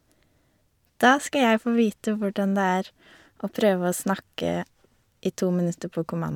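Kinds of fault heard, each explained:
Nothing stood out on listening to this speech recording.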